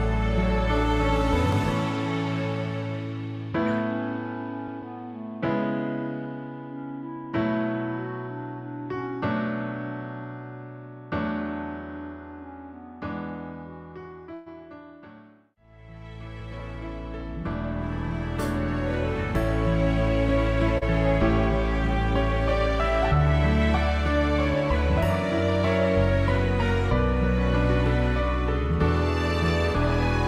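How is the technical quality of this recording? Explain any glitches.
There are three distinct glitches here, each a short, one-off event.

Right at 1.53 s there's a single sharp click, which is most likely dropped samples. A tiny slice of the stream, well under a millisecond, went missing, so the waveform jumps straight from one value to a later one. Nothing audible is lost in a gap that small, but the sudden step in the signal is heard as a clean tick, and it shows as a thin vertical line in a spectrogram.

From 14.34 to 14.48 s you get a call audio freeze. The last bit of sound gets stretched into a fading buzz or hiss for about 121 ms, with no actual silence in it, and then the audio carries on from exactly where it stopped. That pattern suggests packets were likely delayed in transit and the jitter buffer ran dry. The receiver padded the wait with that fill and then resumed without dropping anything, so everything after that point lands about 121 ms later than it would have.

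Between 20.78 and 20.83 s there's short concealed packet loss, heard as a brief smear or wobble. About 60 ms of audio never reached the decoder in time. The receiver covered the hole with roughly 36 ms of synthesised continuation of the preceding sound, then blended back into the real signal. Because the patch is shorter than what was lost, the timing shifts the other way, pulling the rest of the audio about 20 ms earlier.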